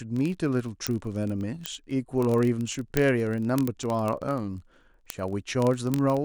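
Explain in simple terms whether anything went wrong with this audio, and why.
Word clock ticks run through nearly the whole speech clip, from 0.12 s to 6.24 s: a steady rattle of sharp ticks about fifty times a second, some three hundred in all. The receiving device's clock was out of step with the sender's by roughly a thousandth, so each time they slid apart, one sample was skipped or doubled.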